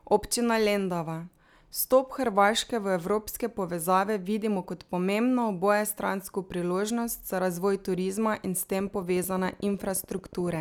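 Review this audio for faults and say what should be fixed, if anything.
There's a train of clicks from 8.73 to 10.56 s: regular ticks at 13.7 per second, roughly as loud as the speech, likely from nearby interference. Keeping cables away from other equipment should stop it.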